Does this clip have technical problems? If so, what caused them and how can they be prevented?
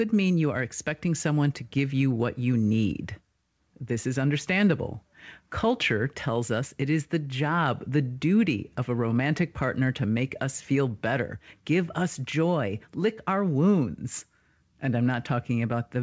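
No, there's nothing wrong here; the speech just came through a normal call path, and the absence of anything above 8 kHz fits a wideband call codec such as G.722.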